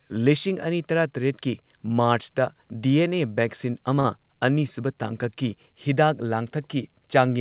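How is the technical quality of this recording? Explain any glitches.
The speech has one glitch, a short stall from a late packet, heard through narrowband call audio that stops at 4 kHz, which fits a G.711 A-law codec.

From 4.0 to 4.06 s, a packet arrived late and the jitter buffer ran empty, so the receiver stretched the last sound for 44 ms until it came, then resumed where it stopped. Nothing is lost, but that moment drags briefly, the last sound held too long.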